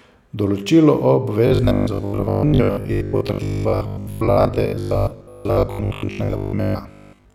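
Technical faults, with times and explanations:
1.47 s to the end (7.35 s), robotic sound from repeated short buffers: new audio was likely arriving too seldom, so playback filled each gap by looping the most recent slice, around 20 ms long, while real audio was skipped. Most of what is heard from there on is these repeats. The fixed loop length imposes a steady 50 Hz buzz, one over the slice length, turning the speech into a rigid, metallic drone that only loosely follows the words.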